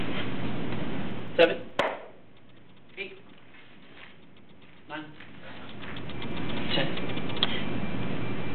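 A fast ticking rides on the sound as the level drops by roughly 20 dB from 1.02 to 2.05 s, and again as it climbs by roughly 20 dB from 5.04 to 6.49 s. This is zipper noise: the gain moves in unsmoothed 2 dB and then 1 dB steps, about ten a second, and each jump clicks.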